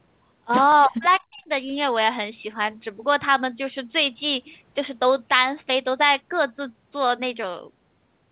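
At 0.72 s a single sharp click is heard, most likely from dropped samples: a fraction of a millisecond of the stream goes missing, so the waveform jumps abruptly between values, drawing a thin vertical line across the spectrogram. The same click recurs at 3.85 s.

Between 0.86 and 1.49 s the speech sinks in pieces, likely speech suppressed in double talk. The echo canceller, confused by overlapping far-end sound, turns the talker down by as much as about 35 dB for roughly two-thirds of that span. The waveform shows hollowed-out stretches and the spectrogram fading bands.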